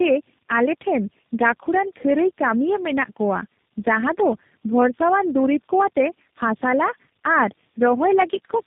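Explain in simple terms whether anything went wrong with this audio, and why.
The speech suffers from tandem speech coding for the whole clip. It passed through four speech codecs in a row, each compressing the previous one's already damaged output. The result sounds rough, muffled and warbly, with nothing above 3.8 kHz.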